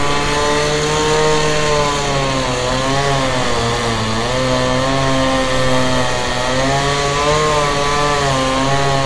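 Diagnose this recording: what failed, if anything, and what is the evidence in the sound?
Nothing failed; no stage shows any fault in this recording.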